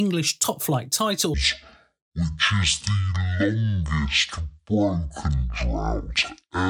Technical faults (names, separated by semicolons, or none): section at the wrong speed